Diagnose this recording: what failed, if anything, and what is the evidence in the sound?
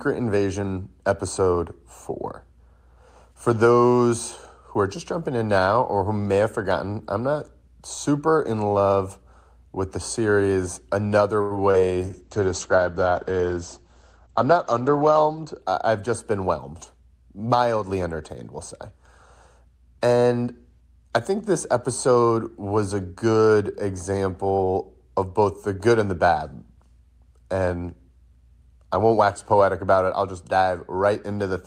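Network stage, short stall from a late packet. At 11.41 to 11.54 s the speech holds one sound too long, with a faint buzz. A packet arrived late and the jitter buffer ran dry. The receiver stretched the last sound by 89 ms, then resumed where it left off.

Network stage, short concealed packet loss. At 11.71 to 11.75 s there is a brief smear. About 20 ms of audio never reached the decoder. The receiver extended the preceding sound to cover the gap, then blended back into the real signal.

Codec stage, driven by the network: a call bitrate drop. From 12.04 to 15.66 s the speech turns rough and muffled. The encoder fell from 32 to 11 kbps and stayed at the lowest rate for 3.4 s. Audio bandwidth shrank from 20 kHz to 8 kHz.

Buffer stage, jitter buffer speed-up. From 22.08 to 22.63 s the speech sounds hurried, but its pitch stays put. The buffer held too much audio. The receiver trimmed short pitch-period slices, about 70 ms in total, so playback ran at 111% speed.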